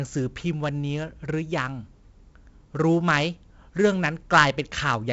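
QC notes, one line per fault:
Throughout: 4-bit ADPCM compression. Each sample is coded as a coarse 4-bit step from a prediction, so gritty hiss rides on every loud syllable and onsets distort. Nothing sounds above 7.8 kHz, which fits a 16 kHz, 64 kbps stream.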